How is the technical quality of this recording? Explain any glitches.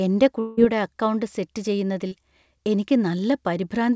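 The speech carries two network glitches, audible against a call-path sound limited to 8 kHz and consistent with G.722 at 64 kbps.

From 0.40 to 0.59 s, just before "അക്കൗണ്ട് സെറ്റ്", a long network dropout is likely. About 0.18 s never arrived, and the receiver stretched the last sound into a fading buzz until the audio resumed.

At 2.07 to 2.13 s, after "അക്കൗണ്ട് സെറ്റ്", short concealed packet loss covers a 40 ms hole with continued sound, heard as a brief smear.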